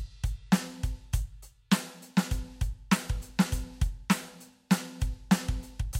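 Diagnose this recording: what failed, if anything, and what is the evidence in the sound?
No failure can be heard anywhere in this music.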